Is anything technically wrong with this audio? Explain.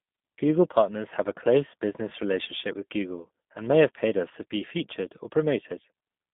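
Yes. A G.729 codec runs through the whole clip. It rebuilds the speech from a vocal tract filter, a pitch predictor and a few pulses per short frame rather than sending the waveform itself, at a coarseness that fits 8 kbit/s. The line band sits at roughly 150 Hz to 3.6 kHz, with nothing above 3.8 kHz, so the speech sounds narrow and muffled, and the modelling leaves a plainly audible rough, synthetic edge.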